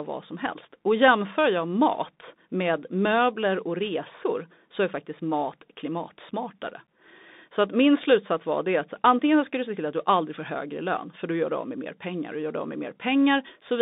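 Narrow, boxy speech with scratchy s sounds and granular hiss throughout, limited to roughly 200 Hz to 3.7 kHz, points to the Bluetooth CVSD headset codec's coarse one-bit coding.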